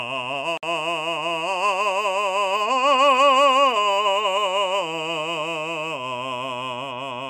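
Two separately encoded pieces of the music were joined without trimming the encoder's leading delay and final-frame padding, leaving a gap at the join from 0.57 to 0.63 s. A 55 ms gap drops into continuous sound, its edges smeared, before playback resumes where it stopped.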